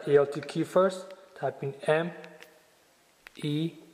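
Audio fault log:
No faults are heard anywhere in this audio. Nothing in it calls for an entry in the log.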